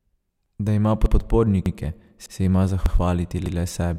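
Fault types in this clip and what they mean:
Overlapping chunks: The speech stutters at a steady rhythm, with a short slice of about 100 ms heard a second time at 0.46, 1.06, 1.66, 2.26, 2.86 and 3.46 s. The audio was cut into half-second chunks, and each new chunk began about 100 ms before the previous one ended, so every join replays that overlap instead of continuing seamlessly.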